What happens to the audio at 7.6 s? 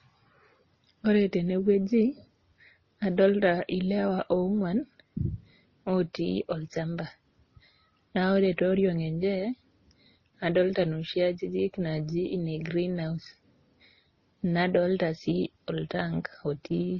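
At 7.6 s the speech carries the same damage heard across the whole clip. It sounds like transcoding between lossy codecs, likely several low-bitrate passes. Nothing reaches above 6.8 kHz, and the smeared, swirly artefacts of different encoders pile up together.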